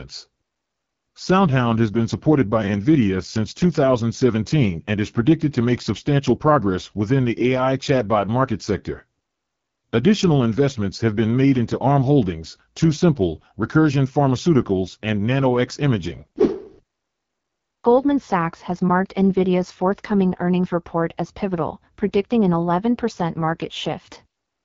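The whole way through, this speech has the rough, raspy edge of the AMR wideband (HD Voice) codec, nothing above 7.3 kHz, consistent with its low 8.85 kbit/s mode.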